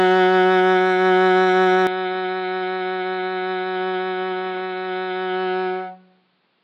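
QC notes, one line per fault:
1.87 s to the end (6.64 s), input switched to a poorer device. The music turns dull and boxy at once, with no gap. Nothing remains above 5.2 kHz. Level drops by about 10 dB. A faint new background noise sits underneath, roughly 40 dB below the music. Likely a narrower-band second microphone.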